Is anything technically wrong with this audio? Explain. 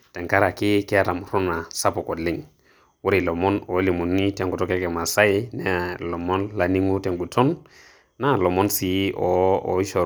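No, nothing technically wrong stood out on listening to this speech recording.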